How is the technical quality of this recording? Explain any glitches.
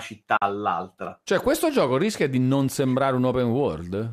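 The recording has one glitch, a short dropout early on, against a backdrop of what is likely low-delay AAC compression that leaves only light coding texture on the speech.

From about 0.37 s to 0.42 s there is AAC frame loss with muting. Roughly 50 ms of audio is missing, which fits about five consecutive lost frames of a 10 ms low-delay codec. With no frames to decode, the decoder zeroes that stretch of spectrum, and the overlapping transform windows taper the sound down into the gap and back up after it. The result is a soft-edged hole in the speech.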